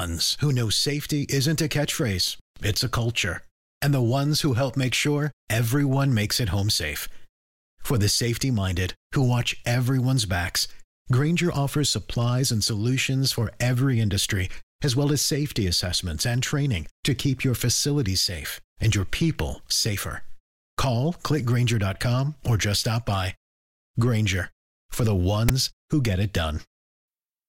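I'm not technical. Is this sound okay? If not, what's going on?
No. At 25.49 s, between "for the" and "who get it", there's a split-second harsh rasp ending in a brief silence. That's file tags played as audio: the file's text labels and blank filler were read as sound.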